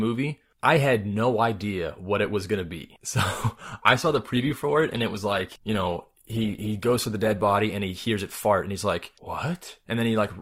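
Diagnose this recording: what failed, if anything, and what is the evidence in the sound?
From 3.55 s to 7.55 s the speech abruptly takes on a swirly texture of codec artefacts, then snaps back to full clarity, with no gap or dropout at either edge. This is an adaptive stream at a lower bitrate, a network-driven codec switch. The player briefly fetched a lower-quality rendition when throughput fell, and the four-second stretch fits Opus dropping from about 64 kbit/s to roughly 16 kbit/s, where the encoder trims treble and smears detail.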